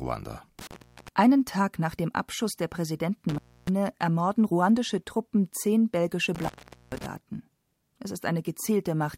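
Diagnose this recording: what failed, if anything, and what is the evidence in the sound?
Three times the speech drops out abruptly, with crackle at the edges and only faint hiss left in the gap: from 0.59 to 1.08 s (about 373 ms open), from 3.29 to 3.69 s (about 293 ms, just before "ermorden ruandische"), and from 6.35 to 7.06 s (about 438 ms, right after "zehn belgische"). This is an intermittent contact in the analogue wiring. A loose plug or cable briefly breaks the signal path, and the crackle is the contact scraping as it opens and closes.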